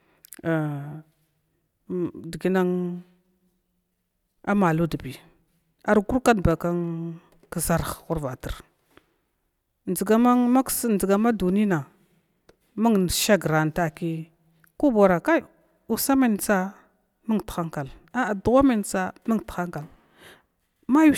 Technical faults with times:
none

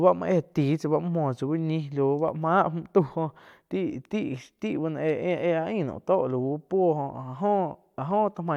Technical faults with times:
none

